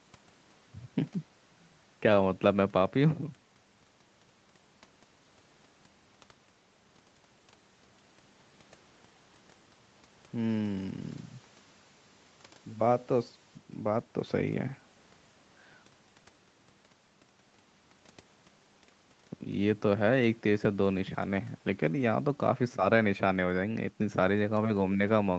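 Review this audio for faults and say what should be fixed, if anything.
Nothing here needs fixing: the speech has been through normal call microphone processing and a WebRTC call path, with nothing above 8 kHz, which fits a wideband Opus stream at around 32 kbps.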